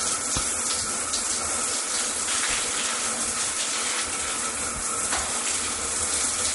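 Throughout, the sound is watery and swirly, with nothing above 11.2 kHz. This is likely MP3 compression, plainly audible and consistent with a low bitrate near 48 kbps.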